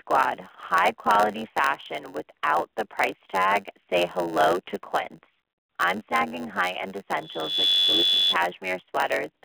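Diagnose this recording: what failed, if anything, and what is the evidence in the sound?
The codec stage failed: the speech has been through the AMR narrowband mobile codec. Nothing reaches above 4 kHz, and the usable band sits at roughly 250 Hz to 3.5 kHz, giving the boxed-in telephone sound. The damage is plainly audible as a buzzy, synthetic edge, which fits the 10.2 kbps AMR-NB mode. The speech is rebuilt from a vocal-tract model and a sparse pulse excitation, so fine detail is lost and replaced by that coarse texture.

A block size mismatch (padded) in the driver or buffer stage runs through the whole clip. A steady buzz at 91.9 Hz sits under everything, and the audio plays at 0.919 times normal speed while the pitch stays about where it should be. The writing stage hands over blocks shorter than the reading stage expects, and the remainder is filled with zeros. That inserts a small silence once per block, which produces the buzz at the block rate and stretches the timing by the ratio of the two block sizes.

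From 7.19 s to 8.37 s a loudspeaker feedback squeal takes over. It is a single tone at 3.4 kHz that swells in under half a second and settles about 10 dB above the speech before it stops. A microphone was picking up the loudspeaker it fed, and at that frequency the loop gain went above one, so the tone built on itself. This is an acoustic fault in the call path and is separate from the codec and buffer faults.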